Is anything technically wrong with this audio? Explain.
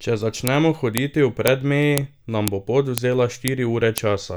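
Yes. A file header is played as audio at 0.47, 0.98, 1.48, 1.98, 2.48, 2.98, 3.48 and 3.98 s, every 0.5 s through the speech. Each half-second piece was joined without its header being stripped, so those few dozen bytes are decoded as samples. Each one is a sharp, loud click regardless of the speech around it. On the waveform it is a brief spike. On a spectrogram it is a thin vertical line spanning the full frequency range, repeating at even intervals.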